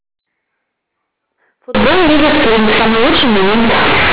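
From 1.75 s to the end of the clip, the speech turns into a very loud, harsh, buzzing distortion, with heavy noise filling what should be quiet gaps and soft passages blown up to the level of loud ones. This is companded audio read as linear: the A-law bytes of the G.711 telephone stream, which band-limits the first part below 4 kHz as normal, are being played as plain 8-bit samples without expansion, so every sign change throws the waveform across about half its range.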